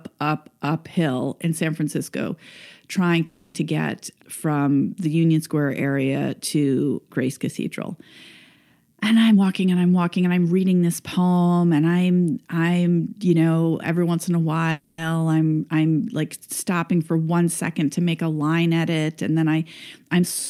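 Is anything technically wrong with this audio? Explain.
Yes, there are two kinds of fault in this speech clip.

There are two call audio freezes, at 3.25–3.56 s just before "get from the", and at 14.71–15.00 s between "every once in a" and "i'm i'm like stopping". Each time the last sound is held as a fading buzz for about 0.29 s and then 0.27 s. Then the speech carries on with nothing lost. It's likely that delayed packets drained the jitter buffer.

There's also a jitter buffer speed-up from 9.28 to 10.61 s, ending at "this poem and i'm". The receiver had too much audio queued, so it clipped out tiny pitch-period slices, about 0.3 s in total. The speech runs at 122% speed with the pitch unchanged, so it sounds rushed.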